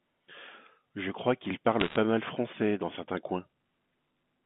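From 1.80 to 1.96 s the speech carries a brief burst of crackle from bit errors on a digital phone line. Flipped bits each corrupt a single logarithmically coded sample, and hits on the sign or upper bits jump that sample far off, producing sharp isolated ticks. The density suggests an error rate of one or two percent. Unlike packet loss, nothing drops out or smears: the speech runs on intact beneath the ticks, still within the narrow telephone band.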